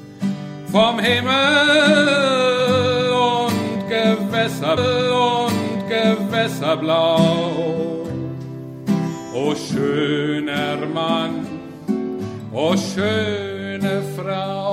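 The player fetched or queued the same stream segment twice, so at 4.76 s the audio jumps back with a small blip and replays about 2.0 s, through 6.76 s.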